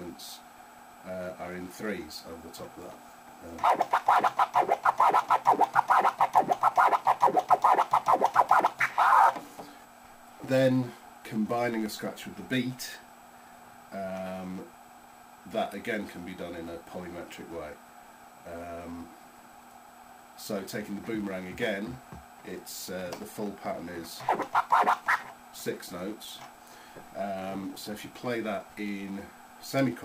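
No technical faults can be heard anywhere in the clip.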